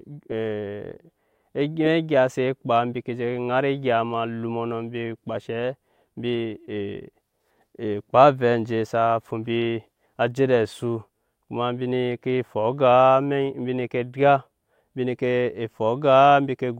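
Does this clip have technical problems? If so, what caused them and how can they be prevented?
No, there are no technical problems in this recording.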